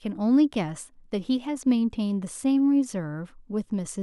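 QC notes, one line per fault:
Nothing stood out on listening to this speech recording.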